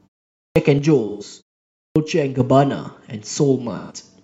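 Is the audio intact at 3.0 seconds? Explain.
Yes, the audio is intact at 3.00 s, with no fault at that moment.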